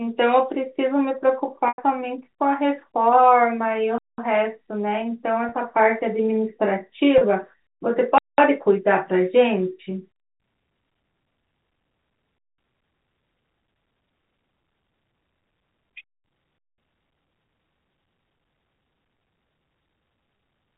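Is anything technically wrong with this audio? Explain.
Yes, two separate problems show up in this speech, riding on what sounds like a telephone-band G.711 line that cuts everything above 4 kHz.

First, packet loss with pitch repetition, at 1.68 s, 5.49 s and 7.18 s. Chunks of the stream went missing and the receiver patched each hole by looping the last pitch period. The one at 1.68 s covers about 100 ms, long enough that the repeated cycle turns into a brief buzzy drone before it fades and the voice cross-fades back in, which fits roughly ten 10 ms packets lost. The other two are only 30 ms, so they come across as a tiny held, slightly buzzy note.

Second, a gap between chunks, landing like clockwork at 3.98 s, 8.18 s, 12.38 s and 16.58 s, each about 200 ms of dead silence. That spacing points to the audio being handled in 4-second blocks, with the player or encoder padding or starting each new block late. 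Nothing is actually missing, but the speech is chopped by holes at every join, so you get an odd regular stutter through the clip.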